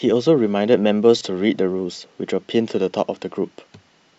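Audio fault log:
1.19–1.21 s, lost LE Audio frames: for about 20 ms the speech turns into a short, hissy smear, with its tonal detail blurred into noise before it snaps back. The dropout fits two missing 10 ms frames on the Bluetooth link. The LC3 decoder covered the gap by repeating the last good spectrum with randomised signs, which keeps the level and rough tone colour but scrambles the phase, so anything pitched comes out as grainy noise.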